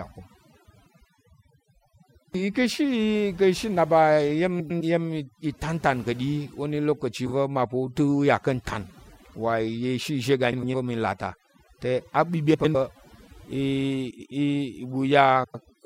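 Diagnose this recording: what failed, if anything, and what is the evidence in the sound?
Throughout, the background is pulled to near silence with twinkling specks. This is overdone noise removal at the call-processing stage: a suppressor set too strong drives frequency bands near its noise estimate far down, taking quiet speech detail with them.

Brief garbled flutters occur at 0.66, 4.60, 7.26, 10.52 (between "izhé iga" and "va̱ mi"), 12.54, 14.10 and 15.44 s. These are frames out of order at the network or codec stage. Two adjacent blocks of about 104.5 ms each, or 26 ms each at 7.26 s, play with their halves swapped. This fits four-frame and single-frame runs, and no time is lost.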